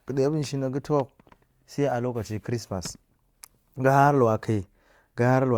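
No technical faults can be heard anywhere in the recording.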